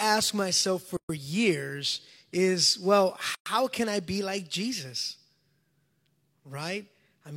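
Gaps at joins of encoded pieces at 0.97 s (125 ms) and 3.35 s (115 ms) break this speech: separately encoded segments were spliced untrimmed, leaving encoder delay and end padding as silence.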